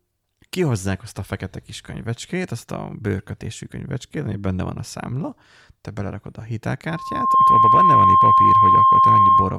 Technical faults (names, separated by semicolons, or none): loudspeaker feedback squeal